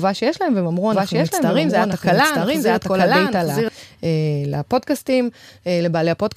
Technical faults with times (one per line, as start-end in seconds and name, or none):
0.92-3.68 doubled audio track